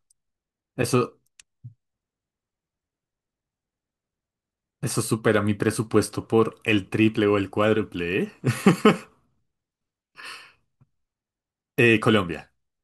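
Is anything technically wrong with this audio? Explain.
No, nothing in this speech clip points to a technical fault. There is no point in the audio where anything goes wrong that would need flagging.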